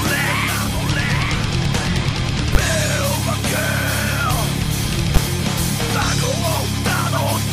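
A corrupt frame decoded at 1.42 s gives a brief chirp, squeak or burst of noise peaking around -25 dBFS, seen on a spectrogram as a short vertical smear at unnatural frequencies. Invalid numbers at full scale at 2.55 s and 5.16 s each pin 10 ms blocks at one extreme value far beyond the audio's peaks, heard as sharp bangs and seen as flat waveform slabs.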